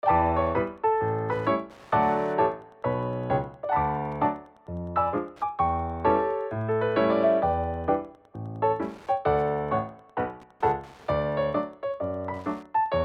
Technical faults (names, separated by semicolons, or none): Wi-Fi interference